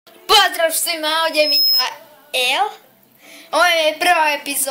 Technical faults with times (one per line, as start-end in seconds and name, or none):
1.32-1.89 loudspeaker feedback squeal